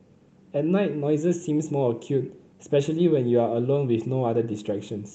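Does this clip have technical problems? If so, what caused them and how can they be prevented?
No, nothing in this speech clip stood out as a technical problem on listening, so there is nothing here that needs preventing.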